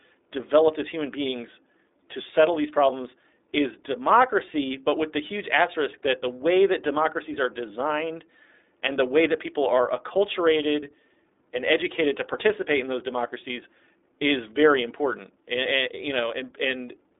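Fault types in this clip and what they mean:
iLBC codec: speech sounds band-limited and slightly rough and synthetic throughout, nothing above about 3.8 kHz, from a narrowband VoIP codec coding each 20 ms frame independently.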